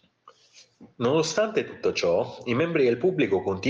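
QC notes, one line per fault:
No faults heard in this speech recording.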